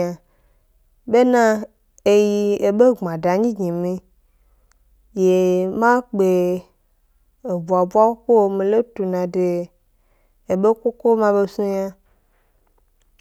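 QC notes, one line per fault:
No faults detected.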